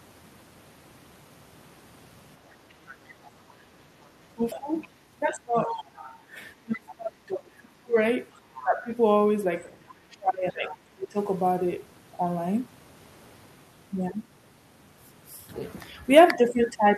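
Speech clip with other side's voice leaking through at 2.5 to 5.84 s, about 10 dB below the talker, then fainter at 8.33 to 8.63 s and 9.72 to 10.74 s. Likely an echo canceller leaving loudspeaker residue. Speech is suppressed in double talk from 4.28 to 8.9 s, dipping by as much as about 30 dB, and again from 10.1 to 11.16 s by about 25 dB.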